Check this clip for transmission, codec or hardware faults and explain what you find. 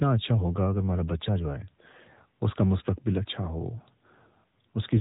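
There's one fault here, and it runs the whole length of the speech: the AMR narrowband mobile codec. Everything above about 3.8 kHz is simply gone, because the codec works at 8 kHz sampling, so the voice sounds boxed-in and telephone-like. AMR-NB doesn't send the waveform itself. It models the vocal tract and excites it with a handful of pulses per 5 ms subframe. The damage is plainly audible, a buzzy, synthetic edge, which fits its 7.95 kbps mode.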